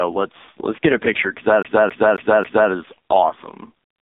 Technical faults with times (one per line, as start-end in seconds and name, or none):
1.63-2.71 CD stuck on one turn